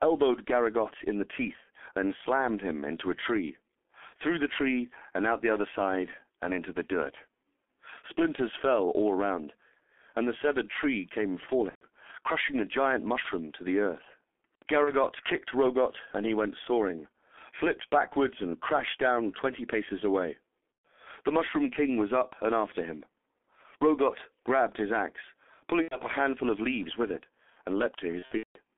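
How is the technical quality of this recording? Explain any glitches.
The recording is heavily degraded by low-bitrate telephone coding, with six short dropouts.

Throughout the clip, G.723.1 codec damage is heavy. Coding at about 6.3 kbit/s in 30 ms frames, the codec keeps only a 300 Hz to 3.4 kHz band and refreshes its vocal model slowly. Everything above 3.4 kHz is gone, so the speech is muffled and hoarse and consonants smear into one another.

There is VoIP packet loss concealed by the speech codec at 11.69–11.86 s (between "the severed tree came" and "crushing a giant"), 13.22–13.28 s (before "to the earth"), 14.85–14.92 s, 20.82 s, 25.82–25.97 s (between "grabbed his axe" and "a handful of leaves") and 28.19–28.59 s. When packets go missing, the decoder keeps repeating its last pitch and filter at falling gain. Each gap becomes a buzzy or noisy smear that fades, and from the third lost frame in a row the codec mutes it. 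The first five gaps fit runs of one to four lost 30 ms frames. The last event is several losses scattered over about 0.36 s, and its longest gap is about 0.18 s. Because each frame is predicted from the one before, the sound stays weak or distorted briefly after each gap.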